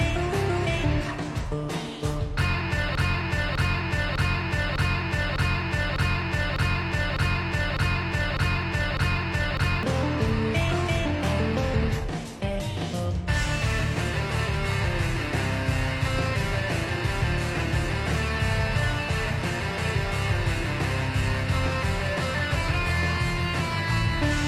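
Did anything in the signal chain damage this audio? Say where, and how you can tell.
Yes. From 2.95 s to 9.83 s a 0.6 s fragment repeats exactly, back to back, 11 times: a broken-record loop. This likely points to a player or stream buffer stalling and resending its last held fragment, so the audio due in that span is lost.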